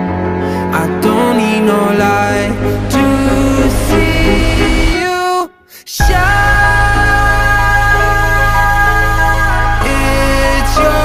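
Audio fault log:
Nothing stood out on listening.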